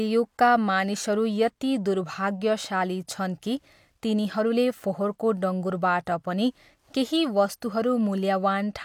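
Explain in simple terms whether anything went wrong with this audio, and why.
Nothing went wrong with this recording: the speech comes through as one continuous, steady signal, with no technical problem at any point.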